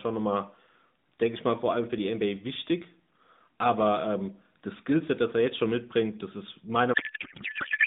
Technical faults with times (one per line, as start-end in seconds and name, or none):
6.94-7.86 codec payload misread